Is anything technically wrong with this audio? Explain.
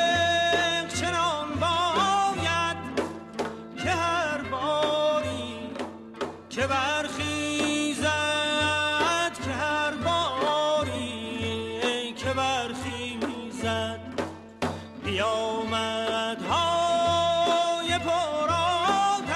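Yes. From 5.32 to 6.14 s there is a block size mismatch (truncated). Each block's end is discarded, which fits 1024-sample blocks, leaving a 43.1 Hz buzz.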